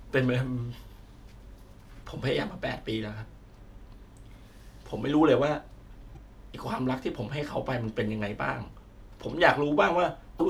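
At 2.00 to 2.04 s, 6.13 to 6.17 s and 10.36 to 10.40 s the speech is broken by damaged data in a compressed stream. Each time, corrupted bytes leave the decoder unable to read the frames there, so it loses sync until it finds a valid header, producing a roughly 40 ms chirp, squawk, click or short hole. On a spectrogram each shows as a narrow vertical disturbance. In the waveform the signal jumps abruptly at both edges.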